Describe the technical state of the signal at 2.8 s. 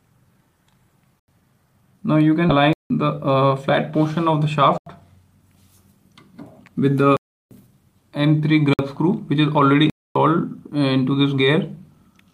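At 2.8 s the signal is inside a block of digital silence from 2.73 to 2.90 s. For about 170 ms the audio drops out entirely, which fits an 8192-sample output buffer at 48 kHz left unfilled. The cut in and out has no fade. Unlike packet-loss concealment, nothing is filled in: it is a hard hole.

The same moment falls within a jitter buffer speed-up from 2.59 to 3.74 s. The receiver trims short pitch-period pieces, about a tenth of a second in total, to drain excess delay. The sound runs at 108% speed and feels hurried, but the pitch stays the same, unlike resampling, which would raise the pitch.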